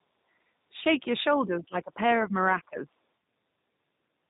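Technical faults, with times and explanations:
Throughout, G.729 codec: The whole clip has that narrow, slightly buzzy, synthetic edge of a low-rate VoIP codec. The speech is rebuilt from a vocal-tract model and a handful of pulses each frame rather than carried as a waveform, so it's intelligible but rough. Nothing comes through above 4 kHz, and the damage is plainly audible. The character of it points to an 8 kbit/s stream, which fits G.729.
1.45 to 2.99 s, speech suppressed in double talk: Across this stretch the voice keeps sinking and breaking up, with around a second's worth of it pulled down in chunks and the deepest dips about 15 dB below the surrounding level. The likely cause is the far end talking at the same time. The echo canceller couldn't tell this talker apart from its own loudspeaker echo, so it ducked everything, clipping pieces out of the speech while the overlap lasted.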